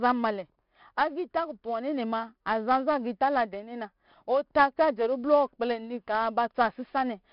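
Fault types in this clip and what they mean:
4-bit ADPCM compression: A gritty hiss rides on every loud stretch of speech, sharp onsets sound rough, and nothing reaches above 5.4 kHz. Each sample is stored as a coarse 4-bit step from a prediction, and the heavy damage fits a rate near 44 kbps.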